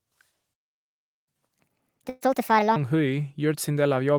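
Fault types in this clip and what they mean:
Playback stall: The player likely ran short of data or was blocked, so the speech cuts out for about 0.74 s, from 0.54 to 1.28 s.
Catch-up at higher speed: The player works through its backlog at 1.5x speed from 1.28 to 2.76 s, lifting pitch by roughly seven semitones before returning to normal.
Burst of packet loss: About 120 ms of audio never arrived near 2.09 to 2.23 s; the receiver stretched the last sound into a fading fill, then jumped ahead.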